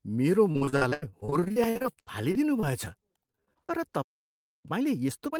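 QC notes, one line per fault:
0.51–2.88 s and 3.26–3.71 s, repeated packet loss (robotic sound): The first run has 26 gaps, the longest 83 ms, with roughly 29% of the span patched over. The second has 6 gaps, none longer than 23 ms, with about 23% patched. Each hole is bridged by stretching the preceding fragment, so the speech turns choppy and robotic. On a spectrogram, harmonic bands freeze into flat, smeared blocks between brief dropouts. The waveform shows repeated, look-alike cycles.
4.02–4.66 s, playback stall: The speech halts mid-flow for about 0.62 s before resuming. The likely cause is the player running dry of data or its thread being blocked. Nothing reaches the output during that time. The waveform collapses to a flat line, and the spectrogram shows a clean vertical band of blank, with abrupt edges on both sides rather than a fade.
4.66 s to end, time-compressed catch-up: Right after the stall, the speech runs at about 1.25x speed while keeping its normal pitch. 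Small slices are removed and cross-faded to work off the backlog, which gives a hurried delivery. On a spectrogram, harmonic spacing stays the same but syllables sit closer together, with occasional seams at the splice points.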